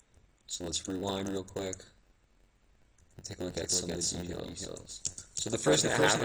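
A block size mismatch (padded) runs throughout the audio, with zero-filled gaps in every block causing a buzz at 91.9 Hz and a slowdown to 0.919 speed with the timbre kept. These gaps appear as regular notches in the waveform and vertical stripes on the spectrogram. From 3.50 s to the end there is a doubled audio track, a full-band copy roughly as loud as the original trailing about 300 ms behind. It shows as a shifted duplicate pattern on the spectrogram that starts abruptly, likely from a second, slower capture path.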